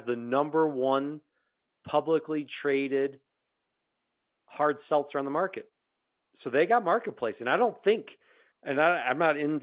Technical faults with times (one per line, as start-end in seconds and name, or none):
none